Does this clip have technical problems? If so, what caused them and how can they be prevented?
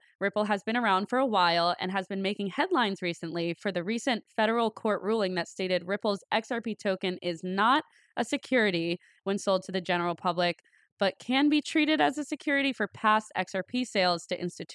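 No, there are no technical problems in this clip.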